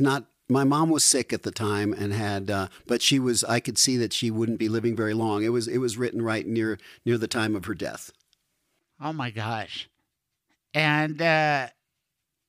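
From 8.08 to 9.26 s the speech turns slightly dull, losing its brightest top end. This is channel delay (comb filtering): one channel trails the other by roughly a single sample, so summing to mono cancels energy around 20 kHz.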